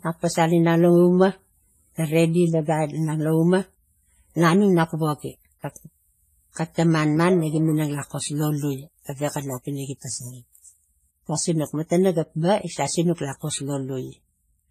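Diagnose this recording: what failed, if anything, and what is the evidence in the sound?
Codec stage: the speech rings and washes throughout, with hiss breathing alongside it and nothing above 15.2 kHz. This is likely heavy WMA compression at roughly 24 kbps, not steady background noise.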